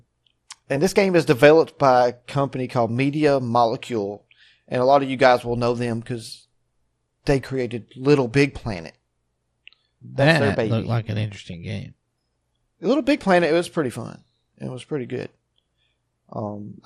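Throughout the speech the sound is dull and muffled, with a gurgling, granular roughness clinging to it and upper detail that flickers in and out rather than holding steady. This is likely MP2 compression at a low bitrate, around 80 kbps. Layer II divides the signal into 32 sub-bands and rations bits among them. Starved of bits, it shuts off the higher bands intermittently and quantises the remaining ones coarsely, leaving that familiar low-rate digital radio texture.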